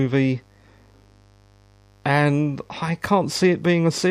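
Speech with mains buzz throughout: a steady, raspy 50 Hz buzz, roughly 35 dB below the speech, from switching spikes every 10 ms, showing as evenly spaced harmonic lines into the kilohertz range.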